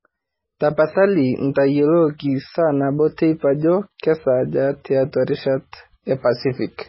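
From start to finish the speech has a hard ceiling, with nothing above about 5.6 kHz. The likely cause is heavy MP3 compression at a very low bitrate, which fits roughly 16 kbps. Starved of bits, the encoder drops the top band entirely. It also zeroes quieter frequency lines, and these flicker in and out between frames. The result sounds dull, watery and swirly. S sounds turn metallic and chirpy, and consonant attacks smear.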